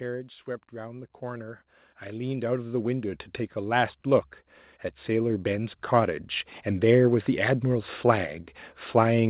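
From 0.71 to 4.35 s, automatic gain rising lifts speech and background together by about 13 dB, and again from 5.05 to 6.31 s by about 4 dB. On a waveform the envelope and noise floor ramp up steadily, and throughout, a spectrogram shows nothing above 4 kHz, which fits G.711 mu-law at 64 kbps.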